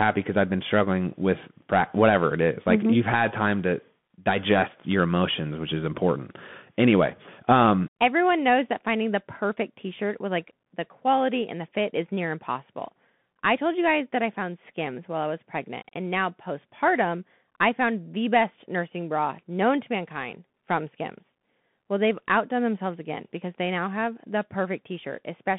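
Throughout the speech, a Bluetooth CVSD headset codec codes each sample as a single up-or-down step, which fits a 64 kbps link. The band is held to 150 Hz to 3.5 kHz, leaving thin sound with scratchy s sounds, distorted loud bright moments and grainy hiss underneath.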